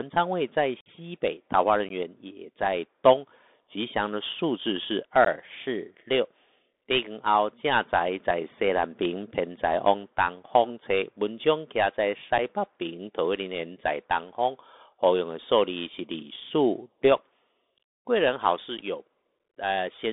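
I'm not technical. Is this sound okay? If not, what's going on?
No. The whole recording sounds thin and muffled, like a phone call, with a grainy hiss under the speech and a scratchy edge on s sounds. It only carries sound from about 150 Hz up to 3.6 kHz, so the crispness and depth are gone. This is the Bluetooth CVSD headset codec, the basic call mode of a wireless headset. It sends the sound as a rapid stream of up-or-down steps, and the steps can't keep up with the sharp, bright parts of the speech.

There are also brief dropouts where the sound cuts out abruptly. The longest, about 50 ms, runs from 0.81 to 0.88 s. Shorter ones come at 1.89 to 1.91 s and 5.25 to 5.28 s, with tiny blips at 12.38 s and 18.78 s. This is unconcealed Bluetooth headset packet loss. Small chunks of sound traveling between the headset and the phone went missing, and nothing filled the holes.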